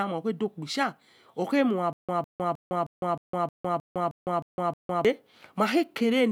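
From 1.93 to 5.05 s the speech breaks into a stutter with silent gaps: the same 155 ms burst repeats ten times, each followed by about 157 ms of dead silence, a steady 312 ms cycle. The likely cause is a stalled stream replaying its last fragment, losing the audio in between.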